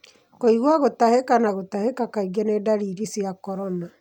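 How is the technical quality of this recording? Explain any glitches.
No glitches can be heard anywhere in this recording. There is nothing technical to explain, as no fault occurs at any point in the speech.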